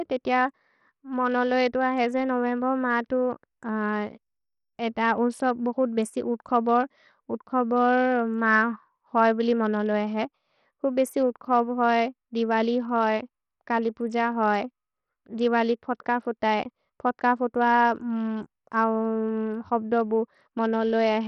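Bluetooth SBC compression, likely the cause of the damage, runs through the whole speech clip. The treble flickers in and out as the top sub-bands lose their bits from moment to moment, though content still reaches about 20.9 kHz when it appears. A gritty, grainy noise and aliasing cling to the speech because the remaining bands are coarsely quantised with no hearing model. The heavy damage points to a starved bit pool, consistent with roughly 64 kbps.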